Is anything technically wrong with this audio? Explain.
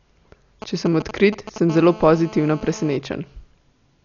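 Yes, there are three faults in this speech clip.

Throughout, the sound is dull and band-limited, with nothing above 7 kHz and rough, fluttering noise where detail should be. This is likely heavy Dolby Digital compression: starved of bits, the encoder narrows the band and replaces missing fine detail with dither noise, which fits a bitrate of about 48 kbps.

GSM signalling bursts run from 0.62 to 1.58 s. A nearby 2G phone handling network signalling sends short groups of radio pulses, which the audio circuitry rectifies. The result is a galloping dit-dit-dit of brief 217 Hz buzzes, roughly 10 dB below the speech.

GSM phone buzz follows from 1.70 to 2.97 s. The phone is now in a call and transmitting in bursts 217 times per second. The rectified pulses produce a hard, raspy 217 Hz buzz full of harmonics, unrelated to the speech and about 19 dB below it.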